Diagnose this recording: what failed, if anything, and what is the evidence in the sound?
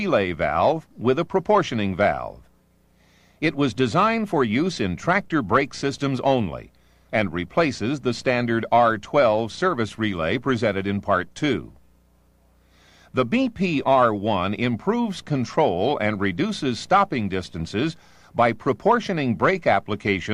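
Nothing failed in this recording.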